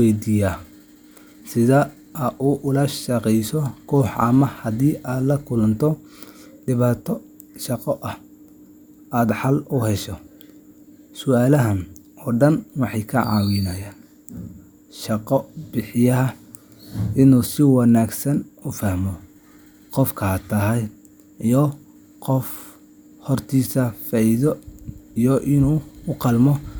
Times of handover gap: none

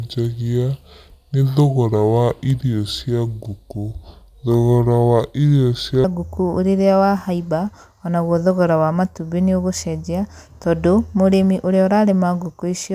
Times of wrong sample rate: 0.00-6.04

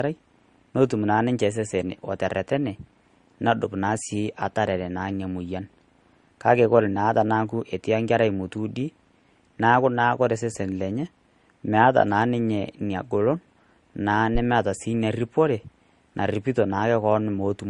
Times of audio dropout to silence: none

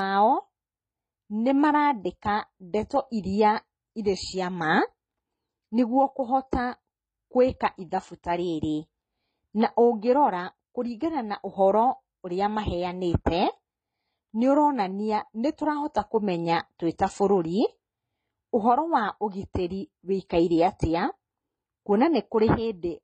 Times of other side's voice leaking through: none

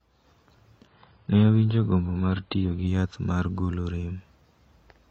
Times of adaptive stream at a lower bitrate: 0.87-2.87

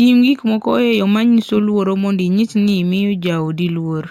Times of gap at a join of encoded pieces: none

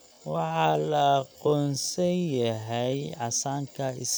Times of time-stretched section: 0.00-2.92

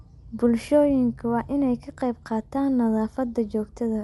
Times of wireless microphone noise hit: none

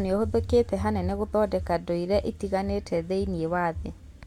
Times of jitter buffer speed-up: none

